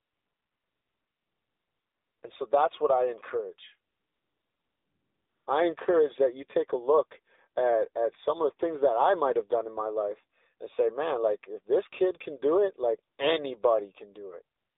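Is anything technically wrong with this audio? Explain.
Yes. The speech has passed through an AMR narrowband mobile codec at 7.4 kbps, and it contains several stretches of AMR comfort noise.

The AMR-NB coding runs throughout. The codec models the voice as a vocal-tract filter driven by sparse pulses, and at 7.4 kbps that model is coarse, so the voice sounds plainly buzzy and synthetic. The line passes only about 300 Hz to 3.7 kHz, which makes the speech thin and muffled. On a spectrogram, the energy stops sharply at 3.7 kHz with nothing above it, and the lowest band under 300 Hz is empty.

The AMR comfort noise occurs four times: from 0.0 to 2.2 s; from 3.92 to 5.46 s, between "that's what I encourage" and "I encourage that you"; briefly from 13.14 to 13.18 s, after "can do it like"; and from 14.56 s to the end. In each stretch the phone stopped sending speech frames, and the receiver filled the gap with synthetic noise built from a rough level-and-spectrum description. 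The real background is replaced by a smooth, steady hiss that switches in and out. A spectrogram shows these as flat, featureless noise bands with abrupt edges. On the waveform they appear as an even, low-level envelope.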